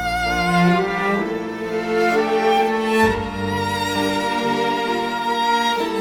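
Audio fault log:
No faults heard anywhere in this audio.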